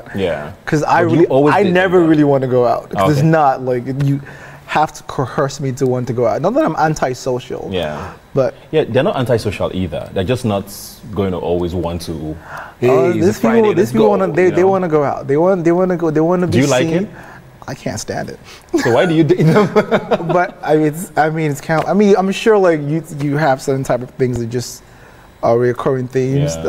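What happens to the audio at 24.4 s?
At 24.36 s, fresh audio failed to reach the output in time, so the device fell back on the block it had just played and sent it out twice more. That is a repeated buffer. Each copy lasts about 1.33 ms, which fits a 64-sample buffer, and the three back-to-back plays meet at hard joins. The result is a brief click or tiny buzz rather than an audible stutter, with essentially nothing of the audio lost.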